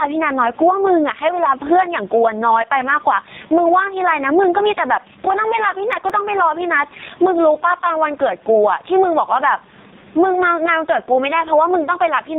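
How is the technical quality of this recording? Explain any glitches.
The technical quality is poor. The speech is heavily band-limited and synthetic-sounding, its level breathes audibly, and a brief run of ticks interrupts it near the middle.

Gain pumping runs through the whole clip. The gain swings by roughly 15 dB. The likely cause is input gain set far too high, with a fast limiter or compressor clamping down on each loud syllable and releasing in the gaps. That flattens loud and soft passages into a squashed, dense level. On a waveform the envelope looks pressed against a ceiling.

The AMR narrowband mobile codec damage is heavy and constant. Nothing above 3.8 kHz survives, which fits 8 kHz sampling, and the buzzy, robotic texture points to AMR-NB at its lowest mode, around 4.75 kbps. At that rate, each frame's vocal-tract model is excited by only a few pulses, so voicing turns rasping. 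The room noise, about 37 dB below the speech, becomes a faint swirling warble. A spectrogram shows a hard, flat ceiling near 3.8 kHz with blank space above it.

CD scratch ticks occur from 5.93 to 6.27 s, three sharp clicks in that third of a second. A scratch has destroyed more data than the disc's error correction can rebuild, once per revolution, so the player patched the gap by interpolating or briefly muting. Each tick lasts well under a millisecond. On the waveform each appears as a tiny smoothed-over or dropped-out notch. On a spectrogram each shows as a thin vertical line spanning the whole band.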